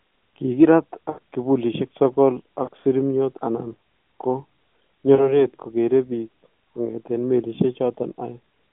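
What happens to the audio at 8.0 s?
Nothing goes wrong at 8.0 s; the speech carries on intact through that moment, still with the narrow telephone-band sound of the AMR narrowband mobile codec it passes through.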